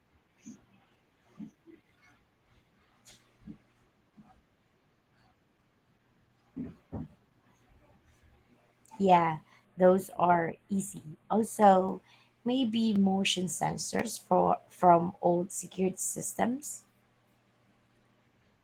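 Throughout the speech, Opus voice compression is plainly audible: the voice sounds somewhat muffled, hoarse and faintly robotic, which fits hybrid-mode coding at around 16 kbps. A spectrogram shows coarse, smeared texture in the upper band, with the finer harmonic detail lost.

From 9.65 to 11.62 s, channel delay (comb filtering) appears. One channel lags the other by a few samples, a tiny fraction of a millisecond, and the mono sum cancels at regular frequencies. The sound turns hollow and phasey, and a spectrogram shows a dark horizontal notch band near 5 kHz.

At 11.89, 12.96 and 14.00 s there are sharp single clicks, each a thin vertical line on the spectrogram and an abrupt step in the waveform. The likely cause is dropped samples: about 0.7 ms of audio missing each time, so the waveform jumps ahead.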